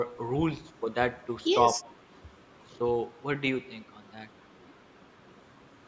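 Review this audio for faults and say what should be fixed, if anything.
From 0.82 to 0.90 s the speech dips by a few decibels for under a tenth of a second. This is likely speech suppressed in double talk: the echo canceller heard both sides at once and turned the near talker down along with the echo. Unlike a network dropout, the sound dips briefly instead of vanishing. Tuning the canceller's double-talk detection to keep the near-end path open while both sides speak would prevent it.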